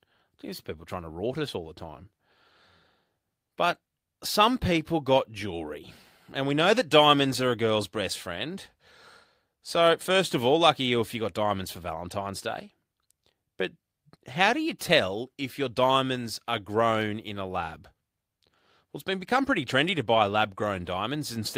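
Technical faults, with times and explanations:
No technical faults can be heard anywhere in the recording, and the signal stays continuous throughout.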